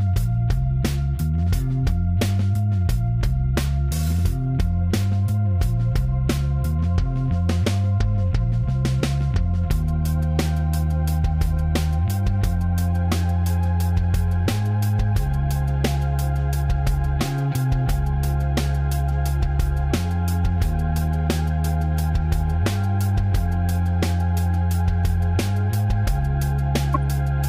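At 26.94 to 26.96 s, near the very end, a corrupt frame decoded: damaged compressed data across a few frames was played anyway, putting energy at wrong frequencies. It comes out as a brief chirp, squeak, blip or noise burst peaking around -10 dBFS, with misplaced spectral content rather than the broadband tick of a plain sample click.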